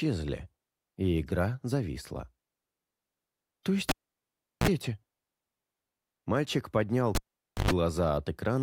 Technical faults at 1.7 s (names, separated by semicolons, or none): none